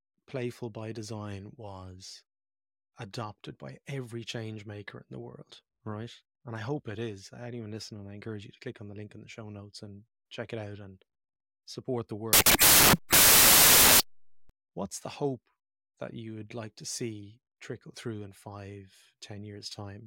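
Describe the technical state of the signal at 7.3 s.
At 7.3 s the speech signal is intact, with no fault audible at that moment.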